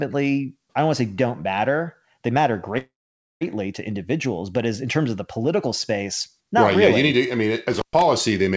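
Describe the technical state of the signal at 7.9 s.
At 7.9 s you're inside an intermittent contact fault, running 7.73 to 8.02 s: a loose connection opens for about 117 ms, dropping the sound out with crackle at the edges.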